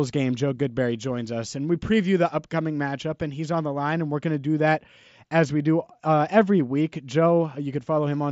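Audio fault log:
The speech passes through a wideband Bluetooth mSBC headset link that carries the band up to about 8 kHz, with only the light coding texture expected of that codec and no faults in the signal.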